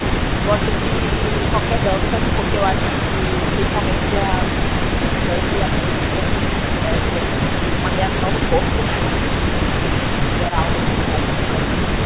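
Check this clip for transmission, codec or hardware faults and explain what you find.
Two echo-canceller faults are audible in this speech clip, heard through a band-limited call path with nothing above 4 kHz, which fits a narrowband G.711-style telephone codec.

Echo leak occurs from 0.00 to 0.46 s and again from 2.83 s to the end. A delayed copy of the speech, at about 244 ms and then 268 ms and roughly 10 dB below it, is likely loudspeaker pickup the far end's echo canceller missed. Unlike room reverberation, it is a distinct repeat, not a smooth decaying tail.

Speech suppressed in double talk happens at 5.12–5.20 s, dipping roughly 10 dB for about 70 ms, and at 7.31–7.85 s, dipping roughly 5 dB across about 200 ms. Likely cause: the canceller mistook overlapping talk for echo and attenuated it. These are level dips, not the hard gaps or glitches of packet loss.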